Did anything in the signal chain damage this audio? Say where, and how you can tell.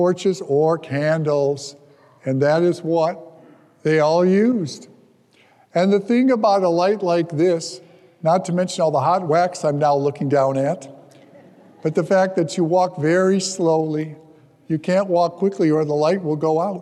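No, nothing in the signal chain can be heard to have damaged this audio. At no stage, from capture to playback, does the sound show a defect that points to one part of the chain.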